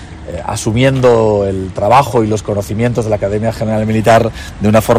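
The clip has a short burst of hard clipping from 1.91 s to 2.20 s. For about 0.29 s the sound is driven roughly 9 dB past what a stage in the chain can pass. The peaks are sliced off flat. Those squared tops throw energy into high harmonics.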